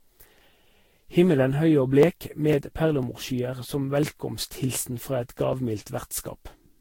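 Generation loss runs through the whole speech clip: the sound is swirly, smeared and hollow, attacks are blurred, and nothing remains above 16.7 kHz. This likely comes from about seven rounds of lossy re-encoding, consistent with Vorbis at roughly 62 to 66 kbit/s, each pass adding fresh quantisation noise and spectral holes.

Periodic USB or driver dropouts appear from 1.03 s to 6.53 s, evenly spaced every 0.5 s, about ten in all. Each time, something stalls the audio path and around a millisecond of sound is skipped outright, leaving a regular tick or pop wherever speech is sounding.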